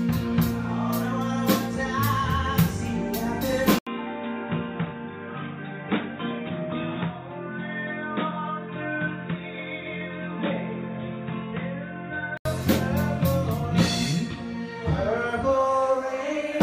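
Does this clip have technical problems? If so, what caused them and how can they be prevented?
Yes. At 3.79 s the sound drops out for about 80 ms, then returns dull and boxy, with nothing above 3.8 kHz. It is a few decibels quieter and carries a faint new background noise. At 12.45 s the full band comes back. The likely cause is the input switched to a poorer device, such as another microphone or a headset's call profile, which passes a narrower band. To prevent it, lock the recording input to one device and disable automatic switching.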